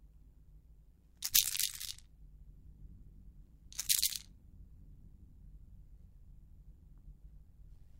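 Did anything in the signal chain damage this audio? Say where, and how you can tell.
Yes. Overlap-add ripple runs through the whole clip, a metallic buzz around 100 times a second with level swings of about 11 dB. A frame-based processing stage rebuilt the sound from windowed frames whose overlaps don't sum to constant gain, so the level pulses each frame.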